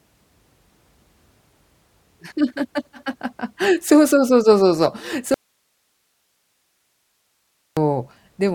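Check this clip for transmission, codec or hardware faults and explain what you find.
One fault stands out: an audio dropout to a faint residue from 5.34 s to 7.77 s, about 2.4 s long. The speech cuts off abruptly and the gap holds only hiss, roughly 50 dB below the speech level, before the speech returns just as suddenly. The likely cause is a brief loss of the incoming signal while the downstream path stayed live, leaving its own noise floor audible. On a waveform the envelope collapses to a thin flat band with vertical edges; a spectrogram shows a sharp-sided block of faint, even broadband noise.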